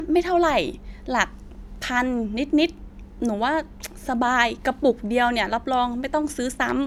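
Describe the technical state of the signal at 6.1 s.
At 6.1 s the speech signal is intact, with no dropout, distortion, glitch or other fault to be heard at that point.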